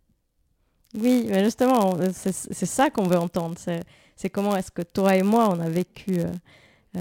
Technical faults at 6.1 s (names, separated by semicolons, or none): block size mismatch (padded)